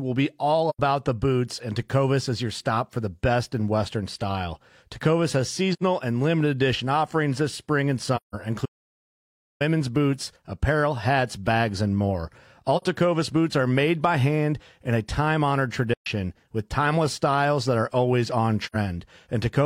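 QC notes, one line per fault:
0.69 to 18.76 s, AAC frame loss with muting: soft-edged holes at 0.69–0.79, 5.73–5.82, 8.16–8.35, 12.77–12.82, 15.94–16.07 and 18.66–18.76 s, lasting 43 to 171 ms. That fits whole AAC frames of about 43 ms being zeroed by the decoder, with the overlapping windows fading the speech out and back in.
8.66 to 9.61 s, audio dropout to silence: the speech cuts off mid-flow and nearly a second goes completely dead, with no room tone at all, before it picks up again. The likely cause is the input going missing while the recorder kept writing silence, so whatever was said there is lost.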